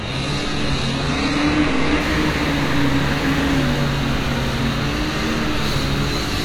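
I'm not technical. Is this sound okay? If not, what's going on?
No. This is an adaptive stream starting at a low bitrate: the player began on a cheap, low-quality version to start quickly, then switched up. For the first 2 seconds the sound is dull, missing its crisp top end, with smeary artefacts, then abruptly clears.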